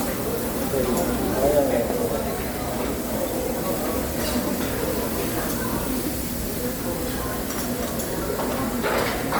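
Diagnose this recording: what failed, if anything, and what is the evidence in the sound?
Codec stage: throughout, the sound has a grainy, breathy top, likely from Bluetooth LC3 compression. A spectrogram shows zeroed upper bands refilled with noise in 10 ms blocks.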